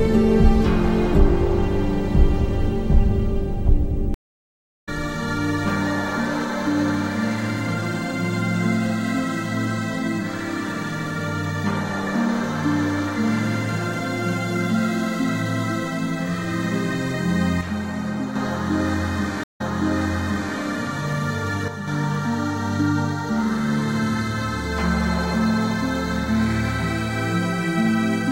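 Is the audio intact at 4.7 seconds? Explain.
No. A stream reconnect runs from 4.14 to 4.89 s, so 4.7 s falls inside it. The connection dropped, and the player fell silent for about 0.72 s while it reconnected, then started a new decoder partway through the stream. When the sound comes back it picks up roughly 0.7 s further on, so the material that played during the gap is skipped. The first frame after the restart fades in.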